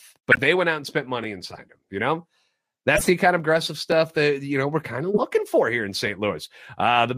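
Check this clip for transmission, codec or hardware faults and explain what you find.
Three kinds of fault turn up in the speech: a muted corrupt frame, three repeated buffers and three decoded corrupt frames.

Corrupt frame muted, 0.32 to 0.38 s, just before "they went out and": damaged compressed frames were rejected by the decoder and replaced with silence. The result is an abrupt hole of about 66 ms, which fits roughly four lost frames.

Repeated buffer at 1.24 s, 3.92 s and 6.07 s (the last just after "for here in"): fresh audio arrived late, so the device replayed its previous block once. Each repeat is short enough, consistent with a 10 ms buffer, to sound like a click or tiny buzz.

Corrupt frame decoded, 1.50 to 1.59 s, 2.95 to 3.10 s, and 5.14 to 5.24 s (between "know we're kind of" and "for here in"): flipped bits in frames that were decoded anyway misplaced energy across the spectrum. 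The first and third span a few frames and the second several, each heard as a chirp, squeak, blip or burst of noise.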